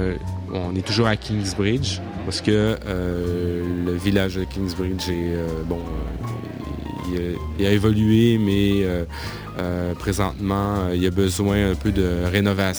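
From 2.67 s to the end, a fine hiss and grainy roughness rides on the sound, growing with loud and bright passages and dropping away whenever the level falls to silence. This is sample clock jitter: the converter's clock wanders by something on the order of ten microseconds, so each sample lands slightly early or late. The resulting error tracks the waveform's slope and sits roughly 25 dB below the signal.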